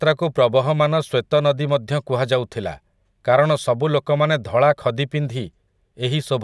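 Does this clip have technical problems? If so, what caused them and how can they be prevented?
No, the speech holds steady throughout with no audible faults, so there is nothing to trace or prevent.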